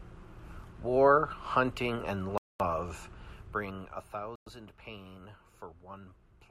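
A wireless link that likely stalled, a Bluetooth stall, starves the headphones' buffer, so playback halts until resent packets arrive. In this speech the sound drops to silence at 2.38 s for about 0.22 s, resuming at 2.60 s, and again at 4.36 s for about 0.11 s, returning at 4.47 s. Each gap is abrupt, a hard cut rather than a fade, with the speech picking up after the pause.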